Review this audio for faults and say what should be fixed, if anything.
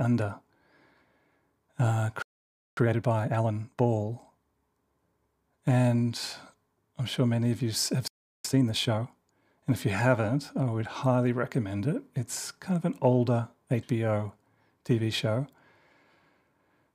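Playback stall at 2.22 to 2.77 s and 8.08 to 8.45 s, after "many of you have": the speech cuts to silence for 0.55 s and 0.37 s, likely from the player running short of data.

Time-compressed catch-up at 2.77 to 3.85 s and 8.45 to 9.17 s: the backlog is cut and cross-faded, so speech runs at 1.5x.

A larger playback buffer would prevent both faults.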